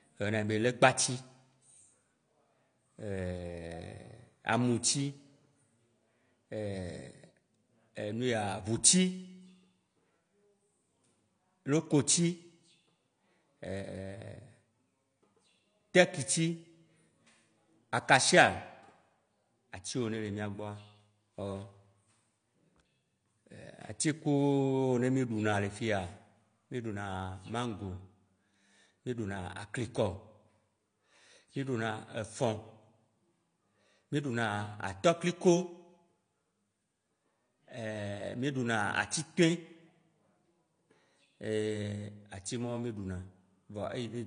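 From start to finish the speech sounds dull and smeared, with a warbly, fizzy edge on sibilants and nothing above 9.8 kHz. That's likely AAC compression, and the damage is plainly audible, pointing to AAC-LC at a low bitrate, around 32 kbps.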